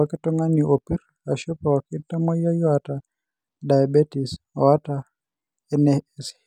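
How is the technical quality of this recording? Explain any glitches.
Nothing in this short bit of speech jumps out as a glitch; there are no dropouts, clicks or other faults to point to anywhere in it.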